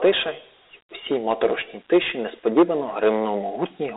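A speech recording carries Dialogic VOX ADPCM coding throughout. Its band runs roughly 300 Hz to 3.7 kHz, with nothing above 3.8 kHz, and a 32 kbps stream that fits 4-bit samples at 8,000 per second. Unlike a plain telephone low-pass, it adds a gritty hiss that rises and falls with the speech. Hard clipping flattens peaks at 1.04–1.46 s (about 4 dB over), 1.93–1.98 s (about 4 dB), 2.48–2.63 s (about 7 dB) and 3.62–3.97 s (about 5 dB). This damage is confined to those loud moments rather than grit following every syllable.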